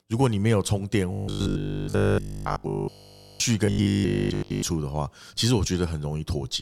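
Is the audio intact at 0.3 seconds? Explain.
Yes, the audio is intact at 0.3 seconds, with no fault audible at that point in the speech.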